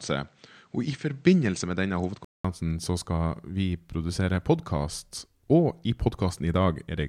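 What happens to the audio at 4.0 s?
Nothing goes wrong at 4.0 s; the speech carries on intact through that point.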